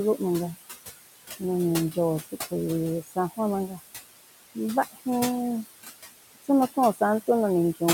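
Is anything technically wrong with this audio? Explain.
Yes. Two related faults come from noise suppression.

Noise suppressor artifacts run through the whole clip. The suppressor judges which frequency bands hold steady noise and lowers them, frame by frame. Here it cuts the room noise, which sits about 10 dB below the speech, by about 18 dB. The background drops away between phrases and comes back underneath speech.

Speech cut by the noise suppressor occurs twice. From 3.02 to 3.39 s, parts of the speech drop by as much as about 15 dB, over roughly a fifth of a second in total. From 3.68 to 3.81 s, a shorter piece drops by about 11 dB. The suppressor mistook quiet speech for noise and lowered it with the background, so those sounds come across faint and swallowed.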